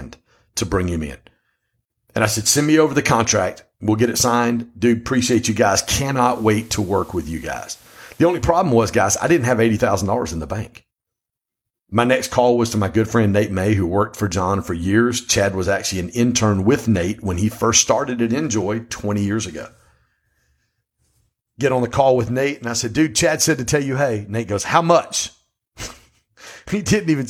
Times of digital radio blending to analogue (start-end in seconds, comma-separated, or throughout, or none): 5.95-8.55